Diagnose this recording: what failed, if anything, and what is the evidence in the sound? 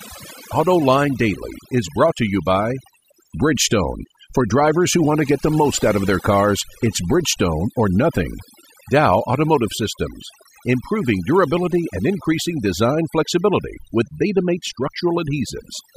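Overdone noise removal at the call-processing stage, present for the whole clip. Between phrases the background drops to near silence dotted with twinkling specks. A noise reducer set far too aggressively is muting individual frequency bands wherever they sit close to its noise estimate, taking quiet speech detail with them. A low-bitrate codec would instead smear transients and narrow the bandwidth, without carving the background into isolated tonal specks.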